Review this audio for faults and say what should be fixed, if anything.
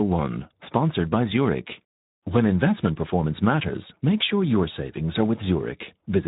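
The speech passed through the Speex codec at a low quality setting. The damage is plainly audible, which fits a bitrate of around 11 kbps. At that rate the CELP coder has too few bits to describe the excitation signal, so voiced sounds lose their natural buzz and come out noisy and hoarse throughout the clip. The band is also capped, with nothing above 3.8 kHz, so sibilants and consonant detail sound dull. To prevent this, capture or re-encode from the original source using a wideband codec or a higher Speex quality setting.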